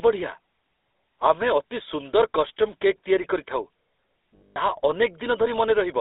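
Throughout, the speech carries the buzzy, gravelly roughness of the GSM full-rate codec, which fits a 13 kbps GSM link. Pulse-driven vocal-tract modelling leaves a grainy excitation, and the spectrogram shows energy confined to about 300 Hz to 3.7 kHz, with nothing above.

From 4.36 to 4.76 s, lost GSM frames are concealed by replaying the last good frame's settings. The gaps total about 180 ms, the longest around a tenth of a second. Each sounds as a rough, metallic ring. On a spectrogram these appear as frozen, smeared horizontal bands, and the waveform shows repeated envelopes.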